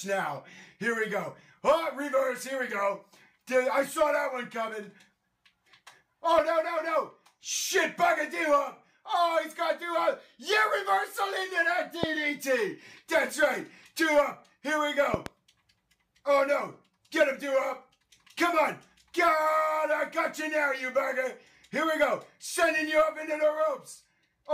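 Loud pop at 12.03 to 12.06 s, then two more in quick succession at 15.14 to 15.28 s, each peaking roughly 15 dB above the sound, which carries on beneath them. A sudden voltage step, likely from a plug, switch or static, was added to the signal.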